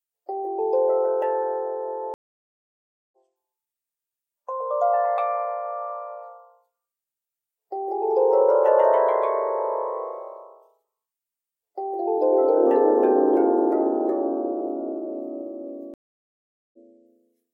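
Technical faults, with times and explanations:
2.14–3.17 s and 15.94–16.77 s, stream reconnect: the connection drops, leaving flat waveform gaps of 0.98 s and 0.79 s. A fresh decoder then resumes roughly a second and half a second further on, so the sound picks up at a later point, fading in.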